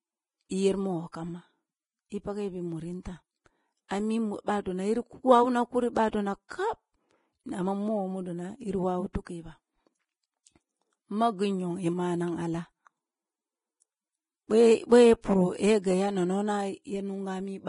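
Heavy lossy coding, likely Vorbis compression at a low rate around 26 kbps, runs throughout this speech: the treble is quantised so coarsely that detail turns to hiss, nothing survives above 10.6 kHz, and the sound is grainy and dull.

Pre-echo appears where quantisation noise spreads backwards across a transform block ahead of sharp onsets: a short hiss at 0.49 s, another from 3.88 to 3.91 s just before "ami bah don yiri", and a third from 6.48 to 6.50 s, each softening the attack.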